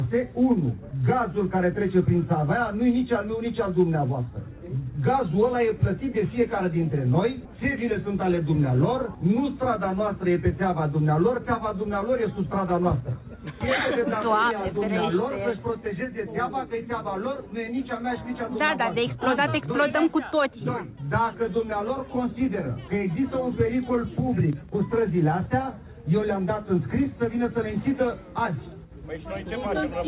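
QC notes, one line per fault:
No faults detected.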